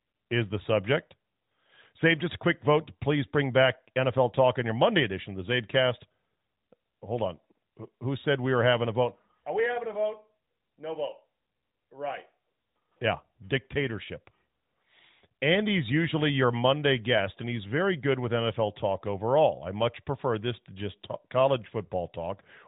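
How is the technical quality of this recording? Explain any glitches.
No glitches found: no dropouts, clicks, distortion or timing faults anywhere in the recording.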